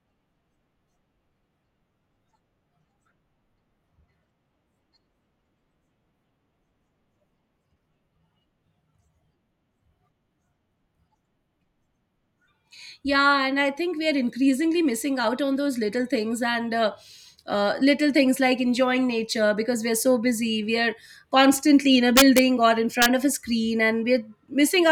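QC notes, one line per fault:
22.17–22.39 s and 23.02–23.06 s, integer overflow: loud peaks pushed about 2 dB past the integer ceiling wrap to the opposite sign instead of limiting, so each sample flips full-scale, giving violent cracks harsher than clipping, right after "are constantly in a" and just before "of a screen".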